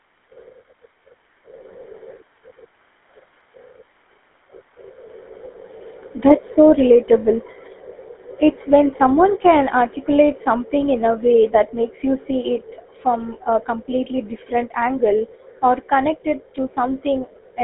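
Speech heard through the GSM full-rate codec from start to finish, with the buzzy, gravelly roughness that comes from rebuilding the voice from a vocal-tract model driven by coarse, regularly spaced excitation pulses. The line band runs from 250 Hz to 3.5 kHz. The damage is plainly audible and sits mainly in the grain of the voice, not in bubbly or watery swirls, which points to a 13 kbps GSM-type path rather than a modern low-bitrate codec.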